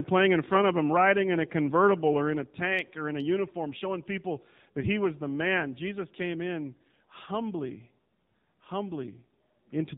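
The clip passes through the AMR narrowband mobile codec at what sounds like 7.4 kbps, cutting everything above 4 kHz; the speech turns buzzy and synthetic.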